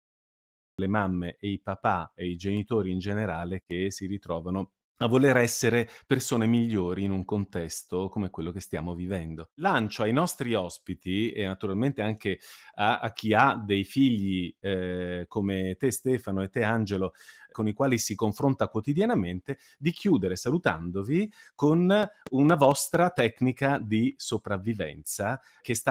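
Right at the start there's a cut-off start: digital silence until 0.79 s, then the speech drops straight in mid-sound before "le mamme e i", with no natural attack. Later, from 22.03 to 23.20 s, a train of clicks ticks over the speech at a steady 4.3 per second, around seven pops standing roughly 10 dB above it, likely interference from nearby gear.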